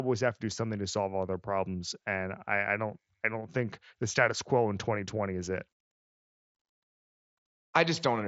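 No faults are heard in the speech, which arrives over a Bluetooth mSBC headset link whose bandwidth stops near 7.7 kHz, with only the light graininess that codec adds.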